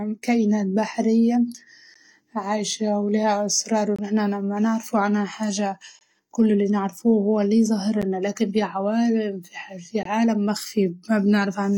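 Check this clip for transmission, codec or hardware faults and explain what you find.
The speech has a regular series of short silent holes, a gap between stream segments, at 1.94 s, 3.96–3.99 s, 5.99–6.01 s, 8.02 s and 10.03–10.05 s. Each is roughly 11–25 ms long, the first after "كائنات بحرية" and the fourth after "هو اللي". Segment timestamps leave space every 2 s, and the player pads it with hard-edged silence. Unlike a dropout, nothing is missing. The sound resumes intact, just slightly delayed.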